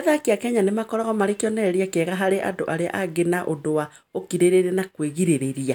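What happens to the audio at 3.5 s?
Nothing goes wrong at 3.5 s; the audio is intact at that moment, with no dropout, click or distortion to be heard.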